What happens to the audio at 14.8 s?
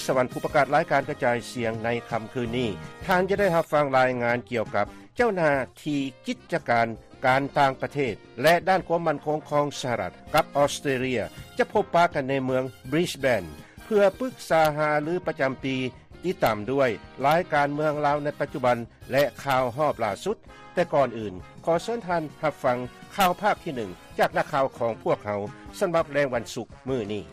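Nothing goes wrong at 14.8 s; the audio plays through that moment intact, with no dropout, click, glitch or other fault.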